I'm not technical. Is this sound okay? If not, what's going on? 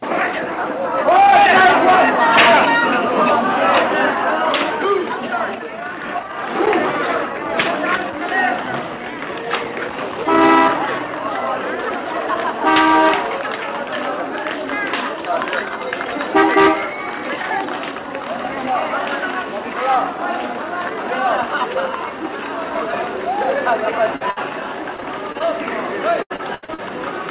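No. Near the end of the clip, pieces of the audio failed to arrive on time as it travelled over a call connection, and the receiving end had to patch the holes.

The first is a short concealed packet loss from 24.16 to 24.22 s. About 40 milliseconds of sound never made it through. The receiver filled the gap by stretching out whatever it had just played, then blended back into the real audio. It comes across as a tiny smear or wobble.

Right after that comes a burst of packet loss from 24.30 to 24.38 s. This time several pieces in a row went missing, about 60 milliseconds in total. The receiver again kept the last sound going but let it fade as the gap continued. You hear a brief held buzz or fading hiss, and then the sound picks up slightly further on, with that stretch skipped.

Finally there are two patches of repeated packet loss (robotic sound), from 24.96 to 25.44 s and from 26.22 to 26.80 s. 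Here pieces kept dropping out one after another: six small gaps in the first patch and five in the second, the longest about 80 milliseconds. Each hole was filled in, but the next followed soon after. Nearly half of the second patch is filled-in sound, so it turns choppy, with bits missing.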